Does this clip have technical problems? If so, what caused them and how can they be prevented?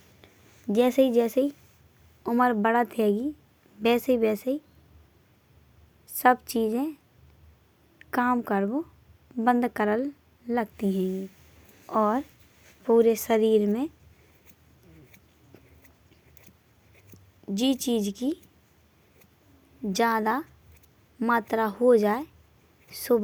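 No, the speech signal comes through intact, with no dropouts, interruptions or other technical faults to be heard anywhere in it.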